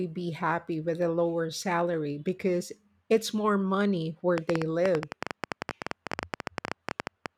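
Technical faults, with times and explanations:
4.38–7.27 s, train of clicks: roughly forty similar pulses at about 12.2 per second, unevenly spaced, standing well above the speech and ticking through the pauses too. Unlike a single pop or crackle, their matching shape and sustained repetition point to likely interference or a faulty connection.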